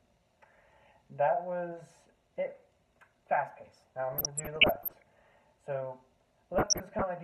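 Burbling breaks over the audio from 4.13 to 5.08 s and, more lightly, from 6.54 to 7.04 s. This is DAB burbling: weak reception lets bit errors, well under one percent, slip past error correction, so corrupted samples put short blips of noise in single sub-bands.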